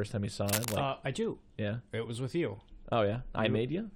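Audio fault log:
0.48–0.76 s, cable scratch noise: dense, uneven rustling about as loud as the speech, likely a worn contact flickering when moved, unlike a single click.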